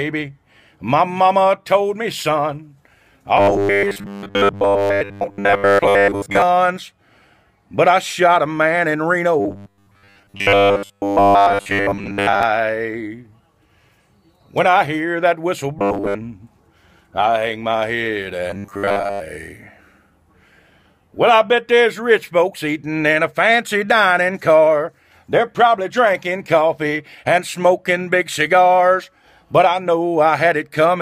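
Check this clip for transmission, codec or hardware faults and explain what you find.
One fault type recurs in four stretches: robotic sound from repeated short buffers, at 3.37–6.42 s, 9.40–12.43 s, 15.79–16.16 s and 18.50–19.21 s. In each, the sound collapses into a rigid metallic buzz near 100 Hz that only loosely tracks the underlying audio. The likely cause is audio arriving too seldom, so playback loops a 10 ms fragment and most of the real signal is lost. A spectrogram would show evenly spaced harmonic lines at multiples of 100 Hz. The waveform would show a short block repeating in a visibly periodic pattern.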